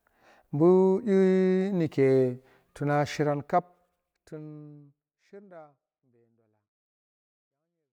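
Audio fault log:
Nothing's amiss in this speech recording, just a gentle editor-style fade-out that starts easing down at about 3 s and settles to silence right at the end.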